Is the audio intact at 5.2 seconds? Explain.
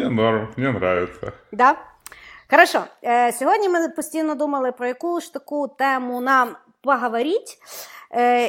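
Yes, at 5.2 seconds the speech plays through cleanly, with no dropout, click, distortion or other fault audible at that point.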